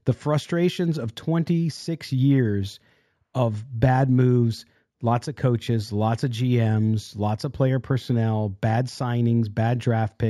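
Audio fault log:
throughout, imaging from linear upsampling: the speech sounds dulled at the top, with a faint metallic shimmer on sibilants. Mirrored spectrum copies sit between 8 and 16 kHz, about 35 dB down, which fits straight-line interpolation from 16 kHz to 44.1 kHz, a weak filter.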